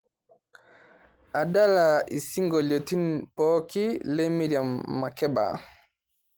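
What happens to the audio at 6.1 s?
Nothing goes wrong at 6.1 s; the speech carries on intact through that moment.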